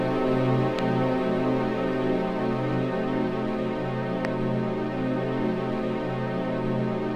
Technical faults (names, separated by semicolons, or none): loud pop